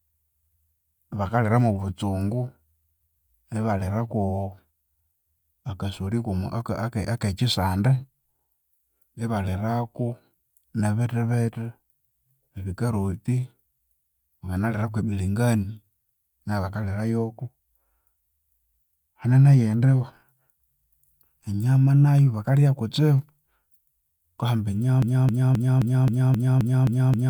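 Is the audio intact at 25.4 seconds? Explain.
No. At 25.4 seconds the speech is caught in a broken-record loop that begins at 25.02 s and runs to the end of the clip at 27.30 s. A 264 ms fragment repeats back to back nine times, giving a stuttering repetition, and whatever should have played there is lost. This likely comes from a stalled player or stream resending the last piece it held. On a spectrogram or waveform, identical blocks recur every 0.26 s.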